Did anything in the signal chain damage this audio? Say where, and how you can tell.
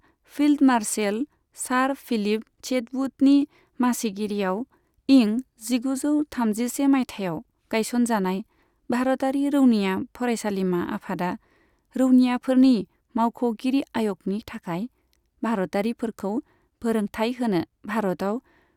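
No, nothing in the signal chain damaged this audio.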